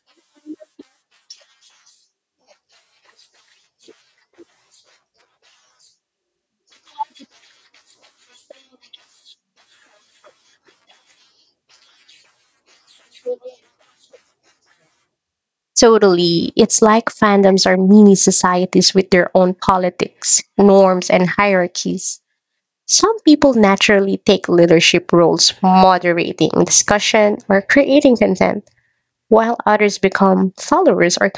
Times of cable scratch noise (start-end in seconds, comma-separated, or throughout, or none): none